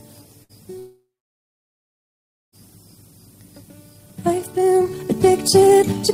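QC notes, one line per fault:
0.43–0.52 s, burst of packet loss: The sound briefly freezes into a short buzz or hiss that fades, then jumps ahead. About 60 ms of audio went missing in transit, and the receiver covered the gap by extending and dimming the last sound.
0.79–2.55 s, long network dropout: A fading buzz or hiss gives way to about 1.5 s of near silence, and the sound resumes further on with about 1.7 s lost. This is likely a network outage, with the receiver stretching the last sound before giving up.
4.22–6.14 s, time-stretched section: From here to the end the pace jumps to about 1.72 times normal with unchanged pitch, sounding rushed. This likely comes from software compressing the section by discarding short slices of audio to preserve pitch.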